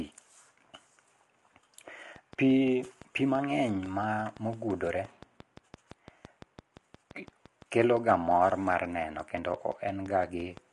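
From the start the speech sounds rough and grainy, with nothing above 11.6 kHz, which points to low-delay AAC compression, likely AAC-ELD at a low bitrate of around 32 kbps. From 2.16 s to 10.58 s there's a train of clicks: about fifty evenly spaced pops at roughly 5.8 per second, poking a few dB above the speech, likely interference or a faulty connection.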